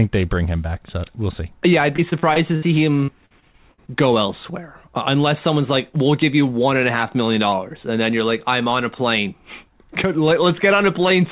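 Choppy, robotic speech breaks up from 1.96 to 2.64 s and again from 3.04 to 3.89 s, just before "go elsewhere uh unless". This is repeated packet loss. Short holes, the longest about 62 ms, kept being patched by stretching the previous sound, covering roughly a fifth to a quarter of each stretch, all within band-limited call audio that has nothing above 4 kHz.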